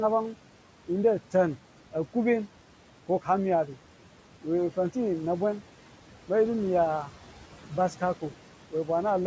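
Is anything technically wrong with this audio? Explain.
Yes, there's noise suppressor artifacts running through the whole clip. The suppressor keeps estimating which bands hold the steady room noise and pulls them down frame by frame, by about 12 dB here. So in the gaps between phrases the background drops away, then swells back up under the speech as the gain opens. The room noise itself sits about 18 dB under the speech, and with nothing above 8 kHz the band limit fits a wideband call codec like G.722.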